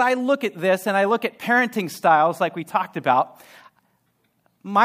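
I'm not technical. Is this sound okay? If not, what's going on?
Yes, nothing here sounds wrong to a listener.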